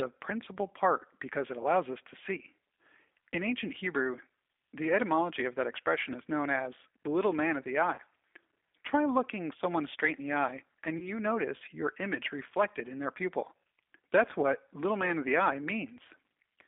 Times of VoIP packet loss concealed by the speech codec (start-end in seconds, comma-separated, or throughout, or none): 7.94-8.00, 10.99-11.10